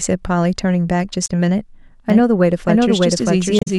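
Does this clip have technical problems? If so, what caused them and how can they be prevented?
Yes. Damaged data in a compressed stream causes brief glitches at 1.24 to 1.29 s and 3.57 to 3.68 s, where corrupted frames make the decoder lose sync. Verifying transfers with checksums and avoiding metadata injection into the stream prevents this.

A doubled audio track appears from 2.10 s to the end. A full-band copy at about equal level trails roughly 0.7 s behind with no room colour, likely from a second capture path or an edit leaving two copies overlapping. Checking routing for duplicate inputs and auditing edit layers for stray copies prevents it.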